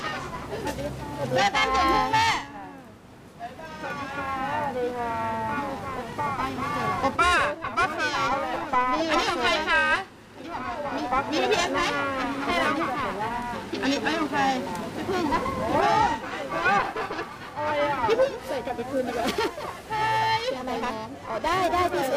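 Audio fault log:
Throughout, periodic clock jitter: the converter's sample clock is being wobbled by interference at a steady rate of around 1 kHz, so each component of the sound acquires sidebands spaced that distance above and below it, stronger on higher-frequency content. The result is a rough, metallic edge riding on the signal, most apparent in brighter material and absent in silent gaps, since with no signal there is nothing for the clock error to modulate.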